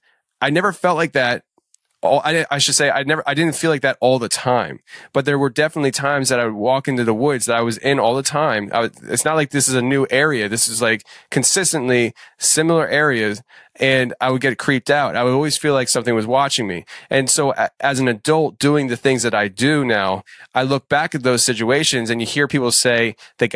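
Listening through the speech recording, nothing stood out as a technical problem at any point.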